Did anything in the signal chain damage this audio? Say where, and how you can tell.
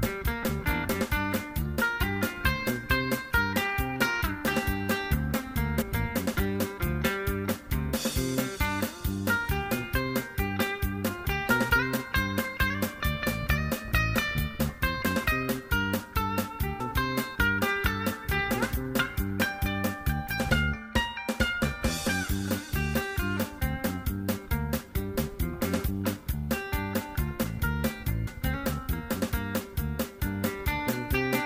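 Yes, compressed frames skipped, at the codec or storage stage: 0.42 s, 5.81–5.83 s, 16.79 s and 28.26 s. Whole 23.2 ms frames vanish, losing roughly 20, 70, 100 and 70 ms. Frame overlap smears each join into a soft blip, a thin vertical smudge on a spectrogram and a jump in the waveform's content where the audio skips ahead.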